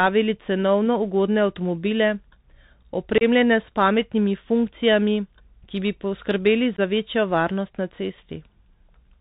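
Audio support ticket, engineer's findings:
Bluetooth CVSD headset codec, whole clip. Speech band-limited, nothing above 4 kHz, plus plainly audible granular hiss and scratchy s sounds. Probable component: headset link running CVSD, which fits a 64 kbps narrowband stream. One-bit up/down coding with adaptive step can't track fast high-frequency energy, so loud bright bits slope-overload and distort.

Unconcealed Bluetooth headset packet loss, 3.18 s. Abrupt hole of about 30 ms right before "s pametnimi funkcijami". Probable component: headset-to-phone radio link. Points to a handful of lost voice packets swapped for silence, no concealment.

Same fault, 6.77 s. Shorter drop, about 15 ms, just ahead of "za večjo varnost na". Likely a couple of packets gone. Same mechanism, hard-edged gap instead of patched audio.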